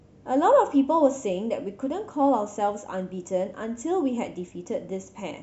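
No technical faults are audible anywhere in this recording.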